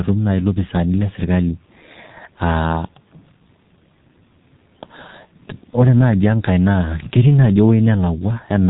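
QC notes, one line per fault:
Throughout, G.723.1 codec damage, heavy. The speech is muffled and hoarse, with smeared consonants. Nothing above 4 kHz survives. The rate sounds near 6 kbit/s. Long 30 ms frames and a slowly updated voice model blur fast changes.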